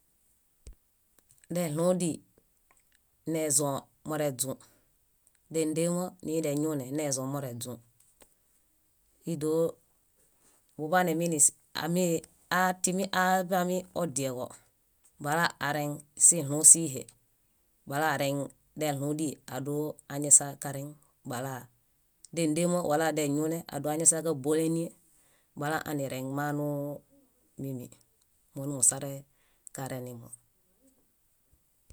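Nothing technically wrong turns up anywhere in this bit of speech, so there's no fault here to time or trace back to a cause.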